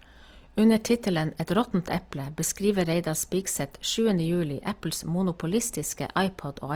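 A short speech clip carrying plainly audible Opus compression from start to finish. The damage sounds grainy and rough rather than hollow: voiced sounds take on a noisy, sandpapery texture while the full band stays filled, with content reaching up to about 20.4 kHz. That sets it apart from MP3, whose empty spectral holes produce a swirling, watery sound. Here, the encoder has likely padded thin bands with folded or noise-like energy, which fits a music-mode stream at around 24 kbps.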